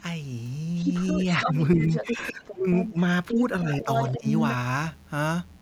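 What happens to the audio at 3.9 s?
Speech suppressed in double talk occurs between 3.63 and 4.25 s, so 3.9 s falls inside it. While a second voice overlaps the talker, the talker's level dips in brief pieces, by roughly 15 dB at the deepest, adding up to around 150 ms of lost or thinned speech. The likely cause is an echo canceller that could not tell the near talker from the loudspeaker echo during simultaneous talk and turned both down.

Other side's voice leaking through covers 1.9 to 4.54 s, which includes this moment. A second voice sits only slightly quieter than the main talker, around 5 dB below it, and competes with it. This is likely the far party's voice playing from the talker's loudspeaker and reaching the microphone, with the echo canceller failing to remove it.

Mains buzz is present here as it is throughout the clip. It is a steady, raspy buzz well beneath the speech, around 40 dB down, built on 60 Hz and its harmonics. 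Sharp switching spikes from a dimmer, rectifier or poorly shielded cable enter the signal twice per mains cycle. Their harmonics reach into the kilohertz range, which gives the buzz its rough edge rather than a smooth hum.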